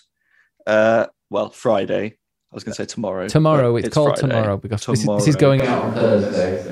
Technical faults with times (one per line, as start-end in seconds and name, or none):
5.60-6.72 switch to a distant microphone